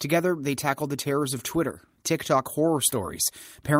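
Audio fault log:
Nothing to flag here; the speech comes through without any trouble worth logging.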